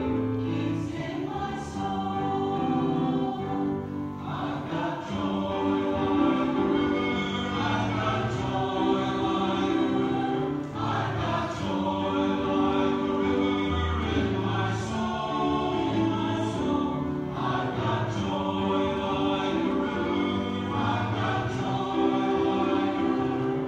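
No technical faults can be heard anywhere in this audio. There is nothing here to place on a timeline.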